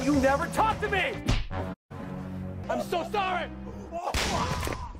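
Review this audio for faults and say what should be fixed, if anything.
From 1.72 to 1.92 s the receiver lost valid frames and muted, a digital broadcast dropout: a 20 ms fade, then 160 ms of programme gone. Better reception or stronger error protection on the broadcast link would prevent it.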